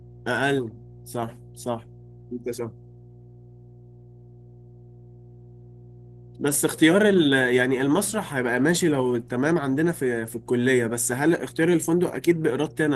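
Mains hum runs through the whole speech clip, from the first second to the last: a steady low tone at 60 Hz, sitting roughly 25 dB under the speech. Power-line current has leaked into the signal path, most plausibly through a ground loop or a transformer close to the recording chain, so the hum stays level and pitch-locked whether anyone is talking or not. A light coded texture from the voice compression can also be heard alongside it.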